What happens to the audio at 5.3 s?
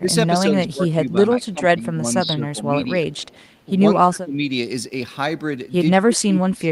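Nothing goes wrong at 5.3 s: the speech carries on intact through that moment, with no dropout, click, distortion or other fault.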